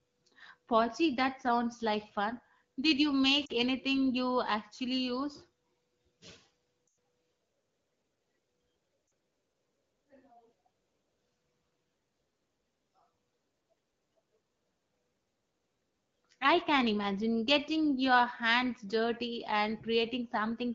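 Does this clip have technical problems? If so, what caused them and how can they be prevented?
Yes: lost AMR speech frames at 3.45–3.52 s, 6.88 s and 9.07–9.11 s, each a drop to near silence where the decoder stretched the last good speech sound with fading gain. That fits bad frames dropped over the radio link (about 40 ms, or two frames, at the first and last spots; about 100 ms at 6.88 s). A stronger signal, or error-resilient link settings, keeps those frames intact.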